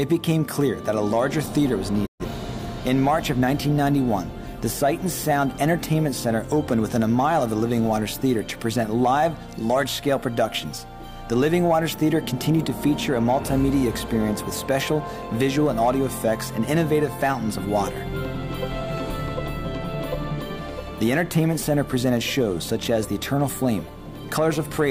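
At 2.05 s the audio fades out over about 20 ms and stays silent until 2.25 s, a classic digital broadcast dropout. The receiver stopped getting decodable frames, most plausibly through signal loss or failed checksums, and muted rather than play corrupt data. The gap, roughly 128 ms of missing programme, fits about three lost frames. On a waveform the envelope tapers quickly to a flat line, then resumes. A spectrogram shows a clean vertical blank band across all frequencies.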